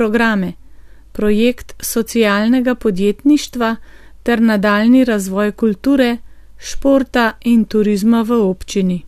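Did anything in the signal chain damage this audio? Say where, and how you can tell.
No, nothing in the chain damaged it.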